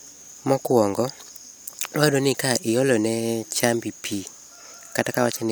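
Listening to the speech here, nothing stood out as a technical fault at any point.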